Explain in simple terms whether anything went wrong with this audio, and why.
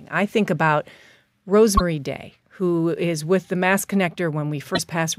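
Yes, the speech briefly garbles twice, at 1.77 s and 4.74 s, each time for about 0.04 s. This is likely a broken MP3 bit reservoir: after a cut, the next piece borrows data that is gone. Unlike a plain dropout, the speech also skips ahead.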